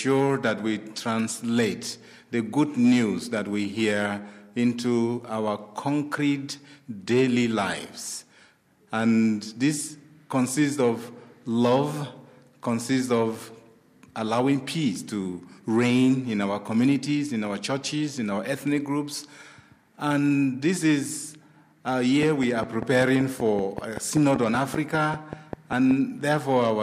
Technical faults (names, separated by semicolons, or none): train of clicks